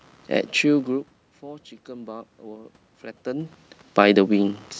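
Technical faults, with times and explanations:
Throughout: computer activity noise. A faint buzzing chirp pulses at around 70 Hz, some 35 dB below the speech, because processor and peripheral load currents disturb the shared audio ground. On a spectrogram it shows as thin, evenly spaced vertical ticks that continue through pauses.
0.85 to 3.63 s: automatic gain rising. After the talker draws back from the microphone around 1 s, the input drops about 19 dB. The gain control slowly adds about 6 dB, so speech and room noise swell together. The waveform envelope and the spectrogram's noise floor both climb gradually.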